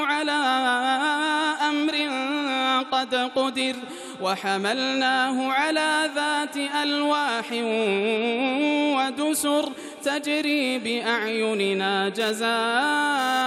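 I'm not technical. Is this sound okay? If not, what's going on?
No. GSM phone buzz from 12.2 to 13.42 seconds: a nearby mobile phone's radio pulses, about 217 a second during a data transfer, leak into the circuitry as a harsh, raspy buzz.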